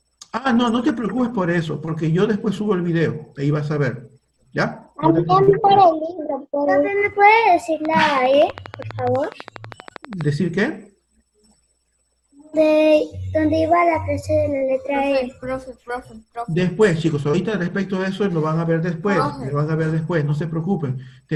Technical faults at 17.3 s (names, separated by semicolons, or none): short concealed packet loss